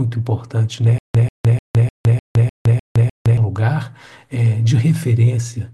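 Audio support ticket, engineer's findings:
Stutter with silent gaps, 0.98–3.38 s. Speech replaced by a 139 ms fragment repeating eight times, each followed by 162 ms of digital silence, a steady 302 ms cycle. Likely a stalled player or stream buffer: each retry replays the last chunk, then runs dry. The original audio for this span is lost.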